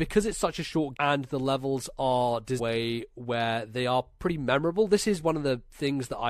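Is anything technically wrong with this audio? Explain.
Yes. Damaged data in a compressed stream occurs twice, at 0.95 to 0.97 s and 2.58 to 2.60 s. Corrupted bytes there make the decoder misread its frames and lose sync until it finds the next header, so the speech is broken by a brief glitch about 20 ms long each time.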